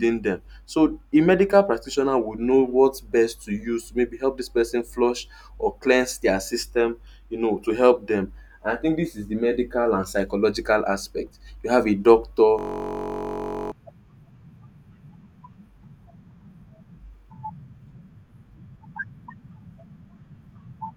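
A system hang loop runs from 12.59 to 13.72 s in this speech clip, starting just after "have a doctor". The sound freezes into a steady buzz at about 46.9 Hz: one 21.33 ms slice of audio repeats over fifty times in a row. The computer or driver has stalled while the sound hardware keeps replaying the same stretch of its ring buffer. The loop length fits a 1024-sample buffer, and about a second of speech is lost.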